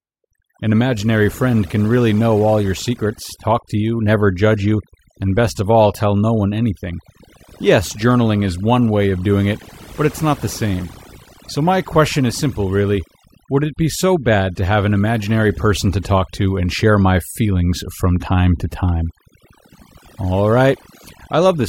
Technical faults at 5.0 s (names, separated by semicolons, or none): overdone noise removal